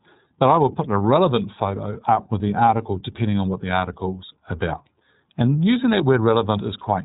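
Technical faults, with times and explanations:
Throughout, iLBC codec: the speech sits in a narrow phone-like band with nothing above 3.8 kHz, so sibilants go dull and the top end is missing. There's a plainly audible rough, slightly synthetic grain, because each 30 ms frame's excitation is coded on its own without drawing on the previous frame, so small mismatches at frame edges add texture. The coarseness points to iLBC's lower-rate mode, around 13 kbps.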